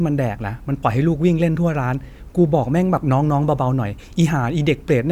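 A short speech recording with no technical faults to report. Nothing in it calls for a time, a value or a cause.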